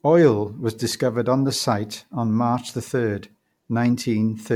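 Throughout, the speech sounds swirly and hollow, with blurred attacks. This is generation loss, likely from about three successive MP3 passes near 96 kbit/s.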